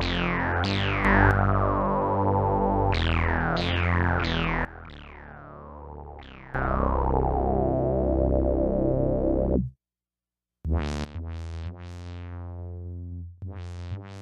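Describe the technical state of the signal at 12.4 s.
At 12.4 s the signal sits inside a sudden gain jump that begins at 11.04 s and runs to the end of the clip. At 11.04 s the level drops by about 14 dB from one sample to the next, with no fade. The sound and its background noise fall together, so the quieter noise floor moves with it. The likely cause is a gain setting or bit shift applied instantly instead of ramped in.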